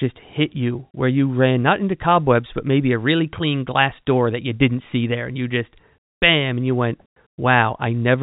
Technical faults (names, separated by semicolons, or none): none